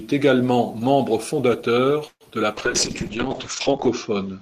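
At 2.07 s the speech stalls: the last sound is drawn out as a fading buzz, ending in a short stretch of near-silence, before the talk resumes at 2.24 s exactly where it broke off, with nothing lost. This is a call audio freeze, likely from packets arriving late and the jitter buffer running dry. The receiver filled about 133 ms with extended sound and silence, so everything after it plays that much later.

From 2.54 s to the end the speech turns rough and muffled, losing its crisp upper range and taking on a coarse, watery texture that stays at its worst for about 1.4 s. This is a call bitrate drop: the encoder's rate fell from 32 kbps to 6 kbps, forcing much coarser coding, and the audio bandwidth narrowed from 20 kHz to 8 kHz, which removes the high frequencies.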